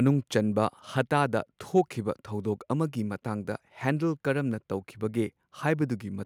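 Nothing in this recording stands out as a technical fault, so there's nothing here to walk through in time order.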